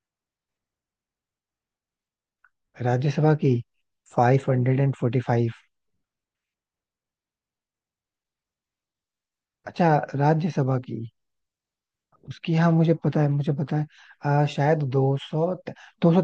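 No audible technical faults turn up anywhere in the recording.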